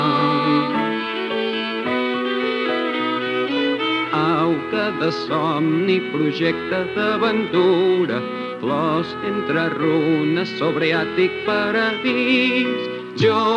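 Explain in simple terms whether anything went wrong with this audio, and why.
Nothing went wrong here: the recording holds steady the whole way, with no breaks, jumps or damage anywhere in the signal.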